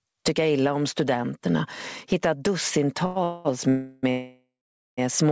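The level never settles: it swings by around 20 dB as loud sounds come and go, leaving the audio squashed and breathing. That is gain pumping, likely from input gain set far too high with a fast limiter clamping every peak. At 3.06 to 3.18 s a sound is held about 98 ms too long, a short stall from a late packet, where the jitter buffer ran dry and stretched the last sound until data arrived. Call audio freezes follow at 3.24 to 3.47 s, 3.69 to 4.05 s and 4.11 to 4.99 s: the sound turns into a fading buzz or hiss, and in the last, longest one it drops to silence for about 0.46 s before resuming where it stopped, with nothing lost. Nothing is heard above 8 kHz, as expected for a wideband call codec.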